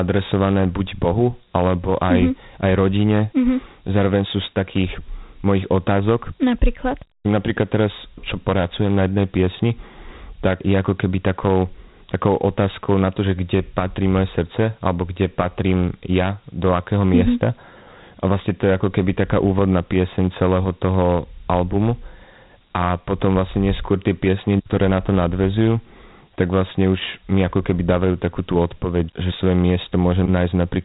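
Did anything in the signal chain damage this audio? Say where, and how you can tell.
Yes. The damage happened at the codec stage, from Dialogic VOX ADPCM, and it runs through the whole clip. The speech has a plainly audible gritty hiss that rides on it. Nothing reaches above 3.8 kHz. Each sample is stored as a 4-bit step relative to a prediction, so the coarse steps leave a rough noise that follows the speech. The band edge and grit point to a 32 kbps stream at 8,000 samples a second.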